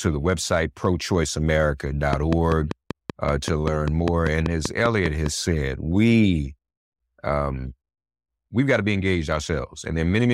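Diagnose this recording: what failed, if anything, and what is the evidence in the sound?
A train of clicks runs from 2.13 to 5.27 s: about fifteen near-identical pulses at a regular 5.1 per second, peaking about 15 dB above the speech and audible through its pauses. This most likely points to interference coupling into the analogue wiring, or a faulty connection or power supply.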